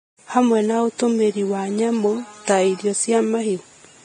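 Hissy, grainy speech runs throughout, with nothing above 9.7 kHz and blurred consonant attacks, likely from heavy Vorbis compression at a low bitrate near 22 kbps.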